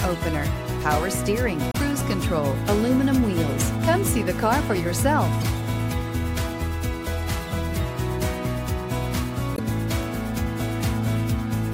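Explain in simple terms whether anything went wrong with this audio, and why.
Something did go wrong, three times. Each is a case of damaged data in a compressed stream. Brief glitches appear at 1.71 to 1.77 seconds, 5.41 to 5.44 seconds, and 9.55 to 9.59 seconds. Each lasts only a few hundredths of a second. The stored audio was corrupted at those spots. The player could not read that stretch correctly. It lost its place and had to find the next readable chunk. That stumble is what you hear as the glitch.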